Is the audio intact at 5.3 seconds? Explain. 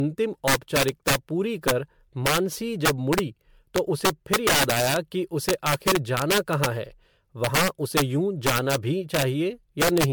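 No. At 5.3 seconds the speech carries both faults that run through the whole clip. Integer overflow makes loud peaks snap into harsh, violent cracks, sharper than ordinary clipping. The level is driven about 8 dB too hot, so the small fraction of samples that exceed the integer limit wrap around to the opposite extreme instead of being held at full scale.

The speech also sounds swirly, smeared and hollow, with blurred attacks and no content above 19.9 kHz. The likely cause is generation loss. The texture fits around ten successive MP3 passes near 128 kbit/s, each re-quantising on a shifted frame grid so the noise and spectral gaps pile up.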